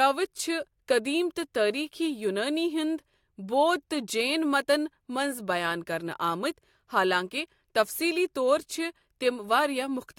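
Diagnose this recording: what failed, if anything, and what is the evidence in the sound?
The converter is where this one went wrong: there's sample clock jitter running through the whole speech clip. The giveaway is a faint hiss or grit that rides on the louder, brighter parts and disappears in the gaps between phrases. The sampling clock wanders by something under a microsecond, so each sample lands slightly off time. Steep, fast-moving waveform segments turn that timing error into an amplitude error, sitting roughly 45 dB below the signal.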